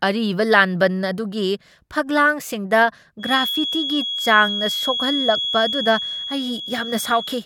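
From 3.18 s to the end of the speech, a feedback whistle sits at 3.3 kHz, a few decibels under the voice. A loudspeaker-to-microphone loop is likely holding just below runaway. On a spectrogram it forms one thin horizontal line, with level that slowly swells and fades.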